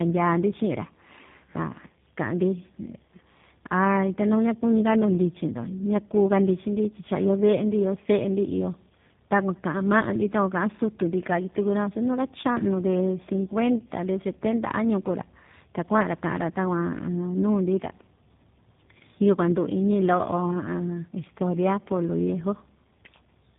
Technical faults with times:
0.00-23.58 tandem speech coding

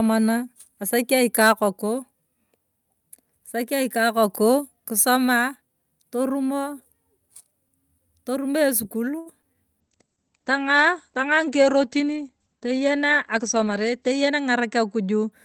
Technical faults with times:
9.19-9.28 short stall from a late packet
9.42-9.55 short concealed packet loss
9.82-15.38 call bitrate drop
13.20-13.93 jitter buffer speed-up

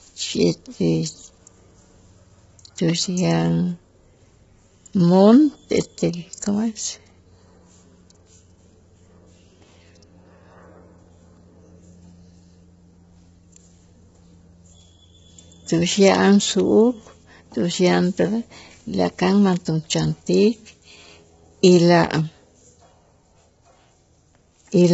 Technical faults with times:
0.00-24.94 low-delay AAC compression

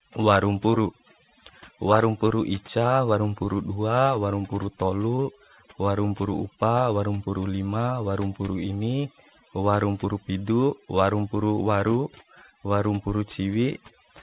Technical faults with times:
0.00-14.22 overdone noise removal
5.16-5.20 short concealed packet loss

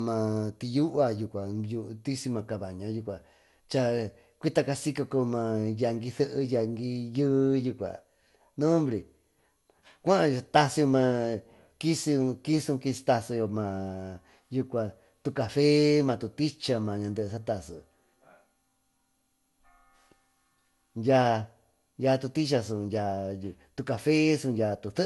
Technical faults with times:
0.00-25.05 generation loss

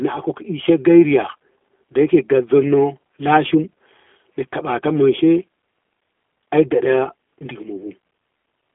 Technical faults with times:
0.00-8.74 G.729 codec

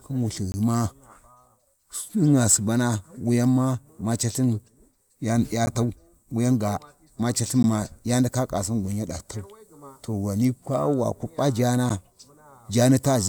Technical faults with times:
0.52-0.54 block of digital silence
5.66 block of digital silence
7.63 block of digital silence
11.89 block of digital silence

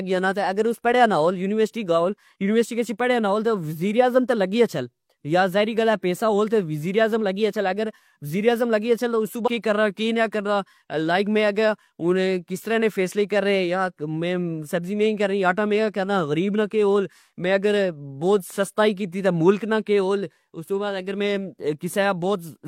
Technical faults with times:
9.43-9.48 stream segment skipped

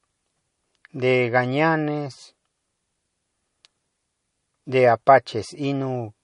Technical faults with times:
0.00-6.23 low-bitrate audio saved at a high bitrate

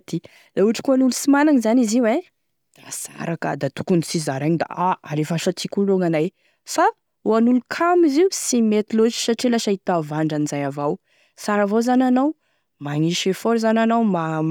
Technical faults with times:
none

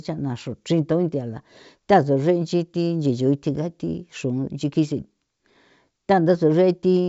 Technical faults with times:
none

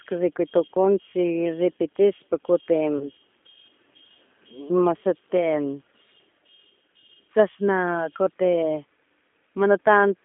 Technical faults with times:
0.00-10.24 G.729 codec
2.98-3.08 VoIP packet loss concealed by the speech codec

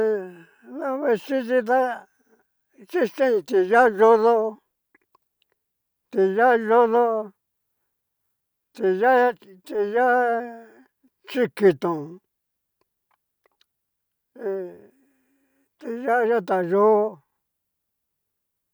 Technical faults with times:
none

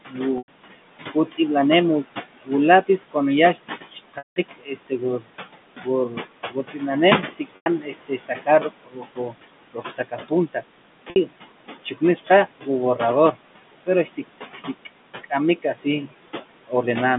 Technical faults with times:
0.00-17.19 noise suppressor artifacts
0.08-1.39 speech cut by the noise suppressor
0.38-0.48 packet loss with pitch repetition
2.37-16.09 speech cut by the noise suppressor
4.18-4.36 packet loss with pitch repetition
7.56-7.66 packet loss with pitch repetition
11.10-11.16 packet loss with pitch repetition

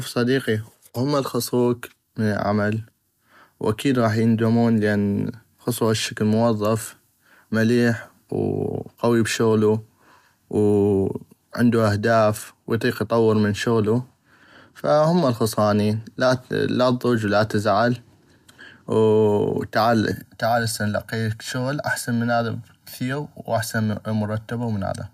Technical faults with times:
20.11-25.14 channel delay (comb filtering)

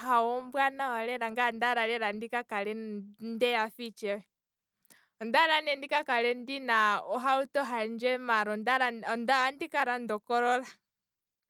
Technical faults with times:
none

